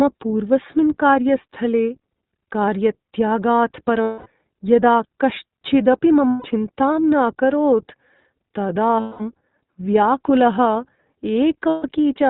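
Across the whole 12-second recording the speech goes through the iLBC codec, and the damage is plainly audible. Everything above 4 kHz is gone, and the voice has a rough, slightly synthetic edge. That texture fits iLBC's 15.2 kbps mode with 20 ms frames. It differs from a simple low-pass filter because the grain comes from the coded excitation, not only from missing treble.

Lost iLBC frames interrupt the speech four times: at 4.02 to 4.28 s (240 ms) just before "यदा कश्चिदपि", at 6.29 to 6.47 s (160 ms) right after "यदा कश्चिदपि", at 9.00 to 9.21 s (200 ms), and at 11.68 to 11.86 s (160 ms). In each gap the decoder repeats the last pitch cycle mixed with noise. This produces a held, buzzy vowel rather than silence, which is what separates it from a plain dropout. Because each iLBC frame decodes on its own, the voice is clean again almost at once when real frames return. Codecs that depend on earlier frames go on smearing after a loss like this.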